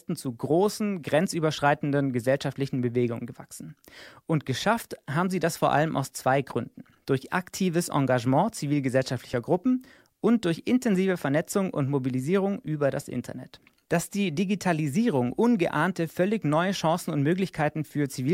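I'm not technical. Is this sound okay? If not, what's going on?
No. Dropped buffer (overrun) at 9.33 s and 12.67 s: two spots where the speech jumps ahead, likely because the recorder briefly missed a sliver of sound, about a hundredth of a second or less.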